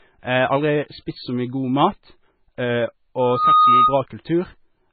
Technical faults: MP3 compression; loudspeaker feedback squeal

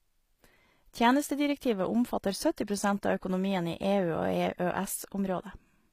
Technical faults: HE-AAC compression

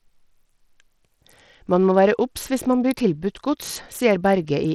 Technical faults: Bluetooth SBC compression

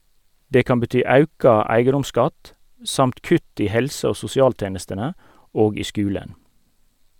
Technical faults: none

